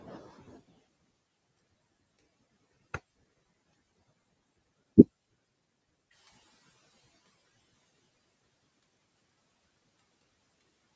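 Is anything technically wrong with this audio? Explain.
Yes. A noise suppressor is shaping this speech and leaves three audible problems.

Noise suppressor artifacts run through the whole clip. The suppressor estimates which frequency bands hold steady noise and pulls them down frame by frame, so the background dips in the gaps between words and swells back under them. On a spectrogram the noise floor looks patchy and speckled, with isolated time-frequency blobs flickering on and off instead of a smooth haze.

Speech cut by the noise suppressor affects most of the clip, from 0.0 to 10.96 s, with the deepest drop about 22 dB. The suppressor mistakes the weaker parts of the speech for noise and attenuates them along with the background, so soft consonants and word endings sound swallowed or faint. In the waveform, syllable tails collapse abruptly rather than decaying. On a spectrogram, high-frequency consonant energy is missing or broken into fragments.

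The noise suppressor is catching up from 6.11 to 8.13 s. Around 6 s the room noise jumps by about 10 dB, and the suppressor's noise estimate lags behind. The louder background comes through with little reduction at first, then sinks by about 21 dB over roughly 2 s as the estimate adapts. A spectrogram shows a bright band of broadband noise appearing at 6 s and fading gradually toward 8 s. The waveform's floor between words steps up, then shrinks.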